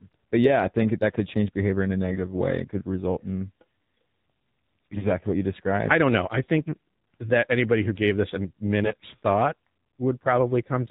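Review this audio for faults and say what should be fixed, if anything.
The speech runs through the AMR narrowband mobile codec for the whole clip, and the damage is plainly audible. Nothing above 4 kHz survives. The voice is rebuilt from a vocal-tract model driven by sparse pulses, so it sounds buzzy and synthetic, which points to a low mode of about 7.4 kbps. A plain telephone band-limit would sound muffled but natural, while this codec adds a synthetic, reconstructed buzz. Preventing it means carrying the call over a wideband codec, or at least a higher AMR mode.

AMR bit errors occur at 2.11–2.20 s, 4.92–5.08 s and 8.84–9.05 s. In each burst the voice keeps roughly its pitch and level but turns hoarse, scratchy and gargly. This happens because flipped low-priority bits misplace the excitation pulses and skew the fine gain and spectrum values. The last burst is the longest and the most damaged, with around a tenth of its bits wrong. 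Packet loss would instead cause gaps or smoothed-over concealment, not a rasp at steady loudness. The fix is a stronger radio link or better channel protection for these frames.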